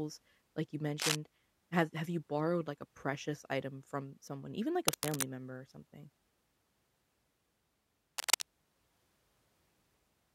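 Cable scratch noise breaks in at 1.00 to 1.15 s, 4.88 to 5.23 s and 8.18 to 8.42 s. It is a brief, uneven rustle over the speech, at or slightly above its level. A worn connector being moved is the likely cause.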